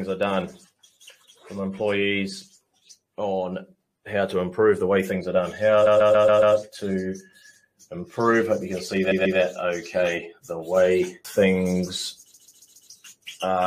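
Repeated frames stutter at 5.85–6.55 s, 9.10–9.38 s and 12.33–12.89 s. A 139 ms block replays five, two and four extra times, lengthening the sound. On a spectrogram, identical slices tile side by side; the waveform shows the same shape copied end to end.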